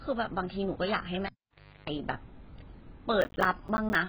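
Heavy AAC compression, likely AAC-LC at a very low bitrate around 12 kbps, runs through the whole speech recording. The encoder discards everything above 5.1 kHz and coarsely quantises what remains, so the voice sounds dull and smeared, with a watery warble and fizzy sibilants.

At 1.26 s a cable is pulled and plugged in again. Contact breaks with a pop and the signal drops for about 0.59 s. A 50 Hz mains buzz lasts about 0.34 s while the plug seats, and a second pop at 1.90 s brings the sound back.

From 3.21 s to 3.95 s, processor overload crackle appears as the system repeatedly misses its deadlines for buffers of around 10 ms. About 15 missed buffers are filled with hard-edged silence, and this produces a gritty, tearing crackle over the audio until the load eases.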